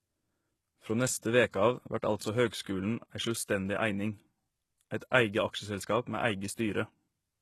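Low-bitrate audio saved at a high bitrate runs from start to finish of this speech clip. Nothing reaches above about 12.3 kHz, and the speech carries the smeared, swirly artefacts of heavy data reduction. The likely cause is a very low-bitrate encoding, on the order of HE-AAC at 16 kbit/s, later re-saved as a high-bitrate MP3. The larger file cannot restore the discarded detail, so the missing top end and artefacts pass straight through.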